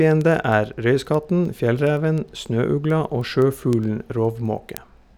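From 0.11 s to 5.08 s the speech carries word clock ticks, around fifty sharp ticks about a tenth of a second apart. An unlocked receiver slips one sample each time, which suggests a clock mismatch near 200 ppm. Unlike random clicks, the rhythm stays steady.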